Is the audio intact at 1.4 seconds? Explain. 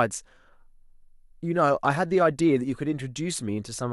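Yes, the speech at 1.4 seconds is intact, with no dropout, click, distortion or other technical fault at that moment.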